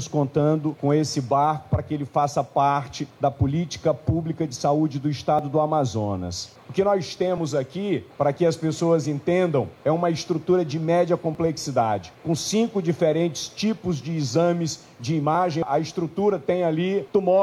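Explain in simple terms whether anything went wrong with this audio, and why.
An overlap between stream segments: the sound arrives in one-second pieces, and where two pieces' time stamps overlap, the player trims away a sliver of real sound. Each cut leaves a tiny click or skip, at 5.39, 7.38, 8.37, 11.35, 14.36 and 15.35 seconds.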